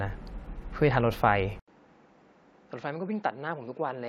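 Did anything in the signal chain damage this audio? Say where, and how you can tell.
Yes. At 1.6 s the sound drops out for 80 ms, then returns duller and about 10 dB quieter, with nothing above 7.6 kHz and a new noise floor around 45 dB down. This is likely an input switched to a poorer device at the driver stage.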